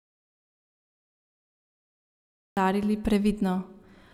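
From the very start until 2.57 s the speech is absent, with an audio dropout to silence already under way when the clip opens. The gap is silent, with no room tone or hiss, which sets it apart from a quiet pause. The likely cause is a lost input or mute, and the speech resumes abruptly mid-flow.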